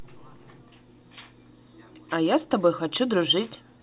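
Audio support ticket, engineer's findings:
No faults found in the speech; the call path is audible only as a band limit near 4 kHz, consistent with a G.711 mu-law codec at 64 kbps.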